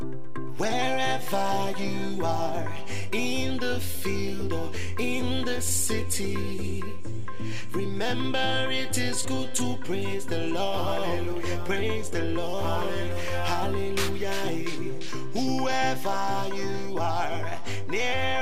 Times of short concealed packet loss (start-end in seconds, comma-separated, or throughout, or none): none